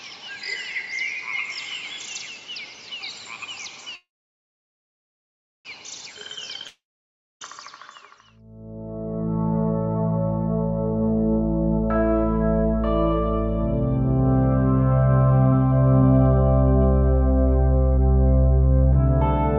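Packets were most likely held up in transit at 3.95 s, draining the jitter buffer, so the receiver stretched the last sound into a fading buzz or hiss and then about 1.6 s of silence. That is a call audio freeze: the audio resumes at 5.67 s exactly where it stopped, with a 1.7 s gap inserted and nothing lost. From 6.19 to 6.45 s the jitter buffer ran low and rebuilt its reserve by repeating short pitch periods, a jitter buffer slow-down that adds about 41 ms and plays the sound at 87% speed without changing pitch, leaving it drawn out. The likely cause at 6.67 s is a long network dropout: nothing arrived for about three quarters of a second, the receiver's fill fades into roughly 0.6 s of silence, and playback picks up at 7.43 s with about 740 ms of audio permanently missing. At 18.93 to 18.97 s a stretch of roughly a fifth of a second was discarded while later audio was already queued, producing a skip ahead, where the two sides of the cut are joined almost directly with only a tiny bridge. 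Throughout, the call codec limits the audio to 8 kHz.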